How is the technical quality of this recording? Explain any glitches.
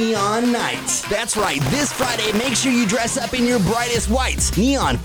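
The recording has one clear glitch, a stretch of processor overload crackle from 1.33 to 2.51 s. The processor repeatedly fails to fill its very short audio buffers on time, well under a millisecond each, so over a hundred missed buffers replay stale audio with hard edges. Together they sound like a gritty, tearing crackle laid over the sound, which stops once the load clears.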